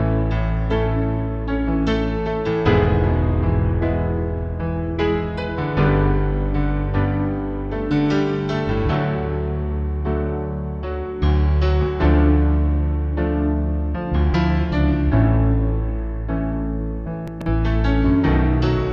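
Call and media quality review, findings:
Chunks out of order, 17.28 to 17.46 s. Short jumbled blip: one roughly 46 ms block lands three chunks late, so it plays after the audio that should follow it. Nothing is dropped, just reordered, giving three hard joins. Likely a jitter buffer or write queue releasing blocks out of sequence.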